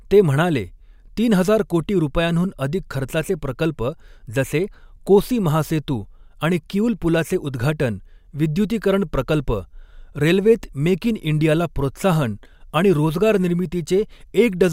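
No technical faults can be heard anywhere in the speech.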